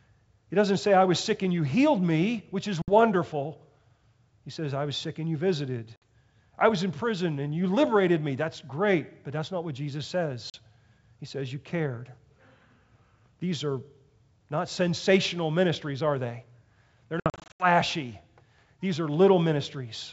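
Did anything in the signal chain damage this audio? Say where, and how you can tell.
Yes, there's packet loss on an ADPCM call, which is a network fault on what sounds like a G.722 wideband link: hard-edged holes at 2.82 s after "healed me which is", at 5.96 s before "I was in prison", at 10.50 s, and scattered across 17.20 to 17.67 s. The decoder's predictor then briefly loses track, so each time the speech returns slightly distorted.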